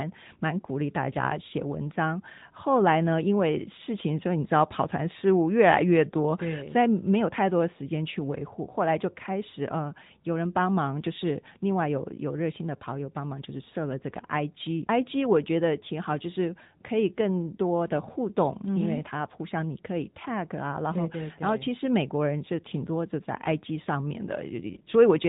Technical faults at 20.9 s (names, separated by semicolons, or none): AMR narrowband mobile codec